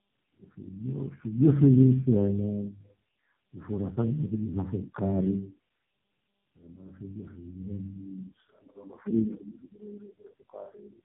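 Throughout, the speech sounds rough, muffled and warbly, with nothing above 3.8 kHz. This is tandem speech coding: the audio seems to have been decoded and re-encoded by three low-rate speech codecs in turn, ending with AMR-NB, each compounding the previous one's damage.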